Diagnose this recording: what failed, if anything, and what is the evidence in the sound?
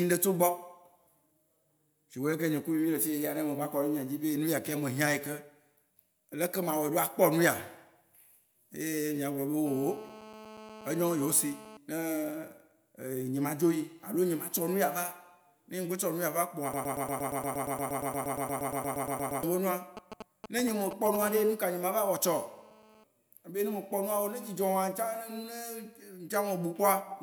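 GSM phone buzz from 9.66 to 11.77 s and again from 21.22 to 23.04 s, at about 18 dB and then about 21 dB below the speech, is pickup in the analogue wiring. A nearby 2G phone in a call bursts at 216.7 Hz, and the circuit rectifies those pulses into a steady, raspy buzz. A spectrogram shows a 217 Hz ladder of harmonics stretching high into the kHz range.

A broken-record loop runs from 16.74 to 19.43 s. A 117 ms fragment repeats 23 times back to back, and the audio that should have filled that span is gone. The likely cause is a stall at the buffer or playback stage that kept re-sending its last chunk. The waveform shows identical blocks tiled end to end, and the spectrogram shows vertical stripes every 117 ms.

GSM signalling bursts from 19.97 to 21.17 s come from the same analogue pickup, roughly 10 dB below the speech. A phone that is only signalling sends short groups of 216.7 Hz radio bursts, and these are rectified into a galloping dit-dit-dit of short buzzes. 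A spectrogram shows clustered vertical spikes and short harmonic patches.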